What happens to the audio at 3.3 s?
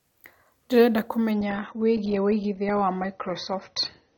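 At 3.3 s the speech sounds dull and watery, with nothing above about 6.4 kHz. The whole stretch from 1.31 s to the end is an adaptive stream at a lower bitrate: the player switched without any gap from a high-quality rendition to a much leaner one, which fits a drop from roughly 96 to 24 kbit/s AAC. The encoder keeps the bandwidth narrow and codes what remains coarsely.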